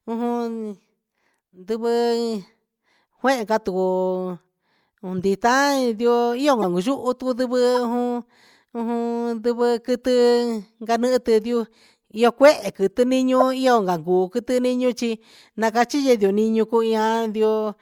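Four short chirps and blips cut into the speech, at 5.18–5.20 s, 6.62–6.64 s, 7.75–7.78 s and 13.40–13.42 s. Each is a few hundredths of a second of misplaced energy. The first is fairly quiet, and the one at 13.40 s is the loudest, peaking around -5 dBFS. This is a corrupt frame decoded: flipped bits in one or a few compressed frames gave wrong gains and codes, and the decoder played them, putting energy at the wrong frequencies.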